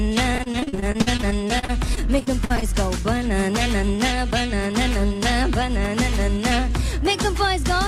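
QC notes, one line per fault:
0.35–2.69 s, repeated packet loss (robotic sound): choppy, broken-up sound; repeated gaps up to 50 ms, each patched by extending the sound just before it.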